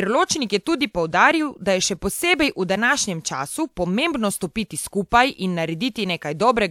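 A speech recording with no technical faults to report. Nothing in the signal path calls for comment at any point in the clip.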